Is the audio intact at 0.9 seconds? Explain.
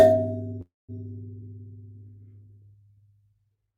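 No. At 0.9 seconds the music is still inside a call audio freeze running from about 0.61 to 0.91 s. The likely cause is packets held up in transit, so the jitter buffer ran empty. The receiver stretched the last sound into a fading buzz or hiss, then about 200 ms of silence. When playback resumes, the music picks up where it stopped. Nothing is lost, but it now runs about 272 ms late.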